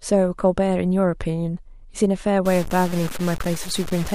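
From 2.46 s to the end, the speech turns grainy and gritty, with distortion that tracks its loudness, while quiet gaps drop to silence or sputter. The likely cause is low bit depth without dither, truncated to what fits 5 bits, leaving error only about 15 dB down. The waveform shows coarse stair steps, and the spectrogram shows broadband hash that rises and falls with the speech.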